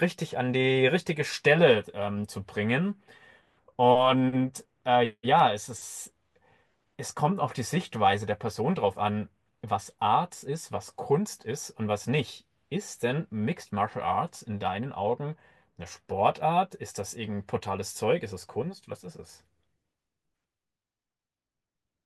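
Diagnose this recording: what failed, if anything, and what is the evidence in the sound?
Dropped samples cause four isolated sharp clicks in the speech, at 7.50, 10.35, 12.27 and 18.42 s. At each, the waveform jumps abruptly to a later value, leaving a thin vertical line across the spectrum. The gap is a fraction of a millisecond, likely from a driver or buffer stage losing a few samples.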